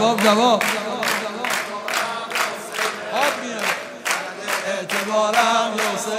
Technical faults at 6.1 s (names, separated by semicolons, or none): none